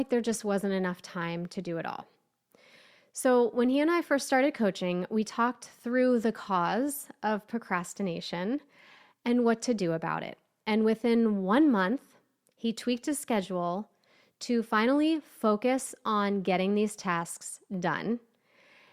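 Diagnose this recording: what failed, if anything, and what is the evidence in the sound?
No audible fault anywhere.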